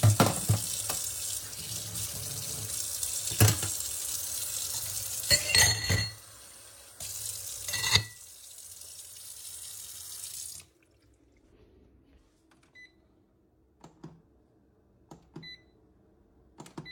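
No technical faults can be heard anywhere in this audio.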